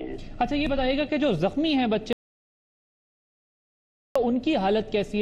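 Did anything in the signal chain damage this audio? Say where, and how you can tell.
Yes. There is an audio dropout to silence from 2.13 s to 4.16 s, roughly 2 s of audio lost. The sound cuts off abruptly mid-flow and the gap is silent, with no room tone or noise floor underneath, then resumes just as abruptly. That points to the capture stage: the input was likely lost through a disconnected device or failed link while the recorder kept writing silence, so nothing from that interval survives.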